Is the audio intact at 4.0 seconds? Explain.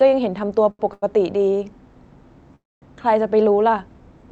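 Yes, the speech is intact at 4.0 seconds, with no fault at that moment.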